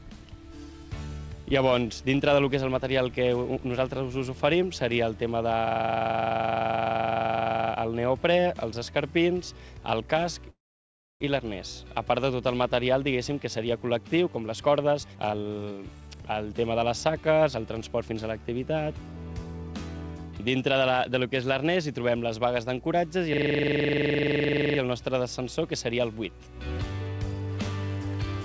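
The audio passed through a call path with nothing above 8 kHz, which fits the G.722 codec. At 5.68–7.72 s and again at 23.34–24.79 s there is a system hang loop: a single 42.67 ms slice repeats exactly, dozens of times, giving a rapid rattling stutter at 23.4 Hz. The system froze while the hardware kept replaying one ring buffer, which fits a 2048-sample buffer. No audio is lost; playback resumes where it stopped. From 10.50 to 11.23 s a call audio freeze leaves a gap of about 0.7 s, nearly all silent. Nothing is missing afterwards; the audio simply resumes later. The likely cause is delayed packets draining the jitter buffer. From 14.36 to 16.54 s a jitter buffer speed-up plays the audio at 132% speed with unchanged pitch, so it sounds hurried. The receiver cut out short pitch-period pieces, roughly 0.7 s in total, to shed accumulated delay.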